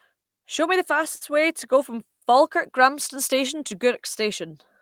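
Burst of packet loss at 1.15 to 1.24 s, after "me the": the last sound is stretched and faded, then 60 ms are skipped before "way to go from".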